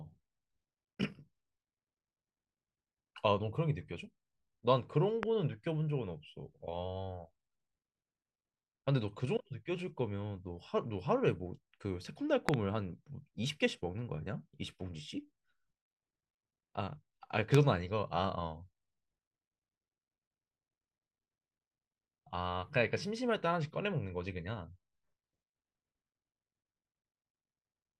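A voltage spike, likely from a plug, switch or static discharge, got into this speech recording's signal path, adding loud pops that sit about 20 to 25 dB above the speech: single pops at 5.23 to 5.25 s and 17.55 to 17.57 s, and a double pop at 12.49 to 12.56 s.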